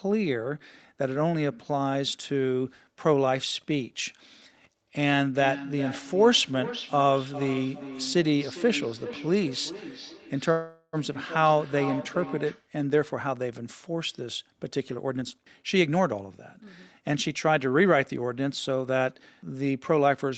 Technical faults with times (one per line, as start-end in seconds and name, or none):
5.33-12.72 feedback echo between two devices
10.51-10.96 call audio freeze
14.78-17.86 jitter buffer speed-up